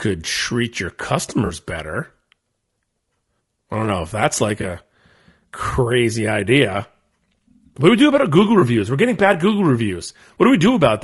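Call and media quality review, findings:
Low-delay AAC compression, whole clip: rough, grainy speech with noise between harmonics and a thin, synthetic top band. Spectrogram shows smeared harmonics and patchy high band. Likely AAC-ELD; short frames resolve pitch poorly, and the damage fits roughly 32 kbps.

AAC frame loss with concealment, three dropouts: 1.45–1.52 s after "treat your" (about 40 ms), 4.61–4.64 s after "know if that's like", and 8.59–8.62 s. Each is a smeared, noisy patch. Decoder concealment repeats the last good spectrum, leaving flat vertical bands and a blurred waveform envelope.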